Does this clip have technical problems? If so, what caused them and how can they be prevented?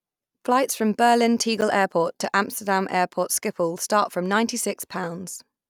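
Yes. At about 1.58 to 1.62 s the speech briefly jumbles: chunks out of order. A 10 ms chunk arrived three chunks late and played after the ones meant to follow it, leaving three hard joins. Fix it by reordering buffers by sequence number before playback.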